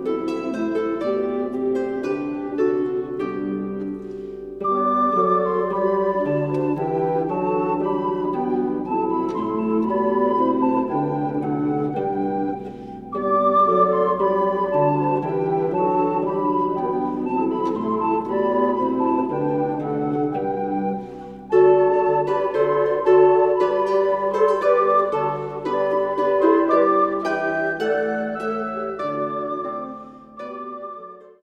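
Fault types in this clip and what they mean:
Nothing stood out on listening that would call for a fault type to be listed.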